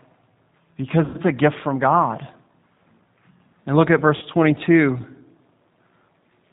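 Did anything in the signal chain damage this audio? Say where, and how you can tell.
Yes. At the codec stage the whole clip carries G.729 codec damage, and it's plainly audible: the speech has that rough, slightly synthetic edge and nothing above 4 kHz, which fits an 8 kbit/s G.729 stream rebuilding the voice from a filter, pitch predictor and a few pulses per frame.

On the network side there's VoIP packet loss concealed by the speech codec, at 1.05–1.18 s and 4.16–4.26 s. You hear the sound smear into a buzzy tone or coloured noise that fades, then stay weak briefly afterwards. That points to roughly 90 ms and 60 ms of lost packets, with the decoder extrapolating its last pitch and filter.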